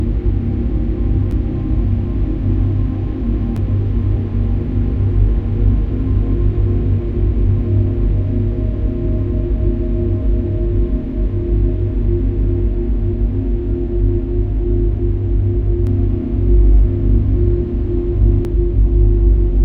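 Right at 1.31 s and again at 3.56 s there's a repeated buffer: new audio didn't reach the output in time, so the last chunk got played a second time. Each repeat is only about 11.6 ms long, which fits a 512-sample buffer, and roughly 10 ms of real audio goes missing. At that size you don't hear a stutter so much as a quick click with a hard edge on each side.

From 15.87 s to 18.45 s the sound gets a doubled audio track: a second full-band copy trails the original by about a tenth of a second at roughly the same level. It has no decay and no room colour, so it reads as a flat, slapback double. It switches on and off abruptly at both ends. That likely comes from the signal being captured again through a slower path alongside the direct one.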